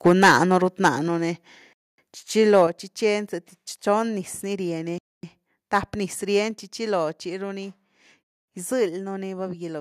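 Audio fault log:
0.06–0.58 s, 0.84–0.89 s and 2.54–2.62 s, microphone overload: The input level was likely set too high, so peaks ran past the converter's ceiling by about 9 dB, 4 dB and 2 dB and their tops were sheared flat. The loudest syllables carry a harsh, crackling edge, worst in the first half-second.
0.08 s, 1.08 s, 2.67 s and 6.51 s, microphone volume stepped down: Automatic gain control likely cut the device's input level in single steps of about 2 dB, 4 dB, 7 dB and 2 dB. Speech and background both drop abruptly at once, three of the drops following closely on distorted peaks.
1.73–1.98 s, 4.98–5.23 s and 8.23–8.48 s, gap between chunks: The audio was handled in 3-second chunks, and each join was left with 250 ms of silence. Nothing is lost, but the sound stops dead and resumes with hard edges, giving holes on a steady 3.25-second beat.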